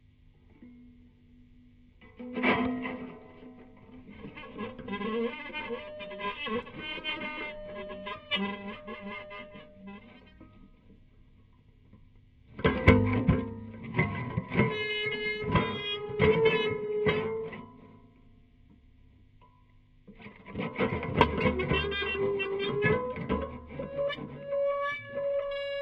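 No technical faults can be heard anywhere in these everyday sounds. Nothing in the recording needs to be flagged at any point in time.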